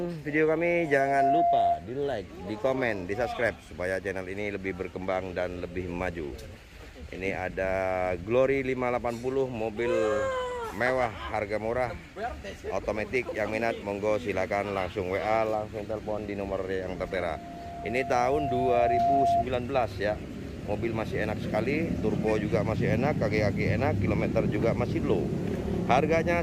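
A microphone is hearing the loudspeaker it drives, and at 693 Hz the loop gain climbs past unity, producing loudspeaker feedback squeal. From 0.72 to 1.86 s a pure tone at that pitch swells within under half a second to a few decibels above the rest of the sound before it is cut. From 16.96 to 19.45 s the same 693 Hz tone returns, this time rising more slowly, over about two seconds, to a similar level.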